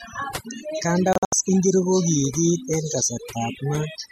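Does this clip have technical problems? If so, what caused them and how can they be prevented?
Yes. Throughout, the gaps between phrases drop to near silence with twinkling specks. This is overdone noise removal: the noise reduction was set too strong, so it pulled individual frequency bands far down whenever they came near its noise estimate, taking quieter parts of the speech with them. To prevent it, use a gentler reduction setting, or record in a quieter space so less cleanup is needed.

Between 1.13 and 1.33 s the sound breaks into several short silent holes, totalling about 144 ms across roughly 192 ms, with the longest gap 72 ms. This is a digital broadcast dropout: the receiver lost good frames and muted until valid ones returned, so that audio is gone. To prevent it, improve reception with a better antenna or placement, or choose a transmission mode with stronger error protection.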